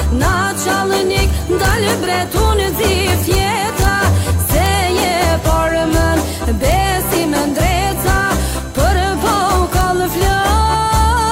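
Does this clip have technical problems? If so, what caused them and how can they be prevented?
Yes. An integer overflow occurs where a sum or gain stage exceeded the largest representable integer and wrapped around to the opposite sign instead of being limited, so each peak over the limit flips across the full range. The result is violent cracks, far sharper than clipping, at 1.65 to 1.91 s, 3.10 to 3.35 s, 3.82 to 3.85 s, 4.66 s, 5.02 s, 6.72 s and 9.81 s. Using saturating arithmetic, or adding headroom before the gain stage, would prevent it.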